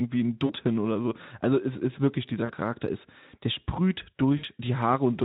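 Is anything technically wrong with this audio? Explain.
Yes. VoIP packet loss concealed by the speech codec occurs three times, at 0.45 to 0.53 s, 2.45 to 2.53 s and 4.37 to 4.45 s. The first two gaps are about 40 ms and the third about 60 ms, which fits lost 20 ms frames. Each time the decoder extends its last pitch and filter state at falling gain, so the speech briefly smears into a buzzy tone or coloured noise that fades before recovering.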